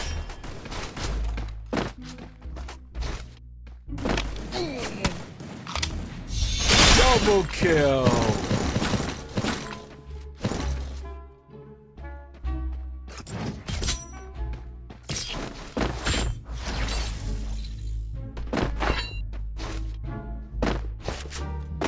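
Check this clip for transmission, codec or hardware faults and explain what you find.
One fault runs through the clip: a wrong sample rate from 0.0 s to 21.1 s. The samples are clocked out more slowly than they were captured, with no rate conversion, which fits audio recorded at 22 kHz being played at 16 kHz. Because nothing resamples the data, timing and pitch shift together: everything runs at 0.726 times normal speed and sits about 5.5 semitones low, so the sound comes across dragged, heavy and noticeably deeper until 21.1 s.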